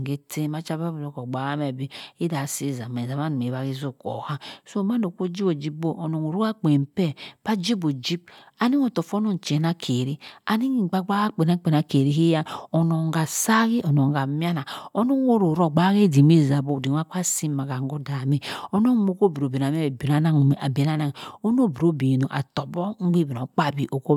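A speech recording with nothing technically wrong with it.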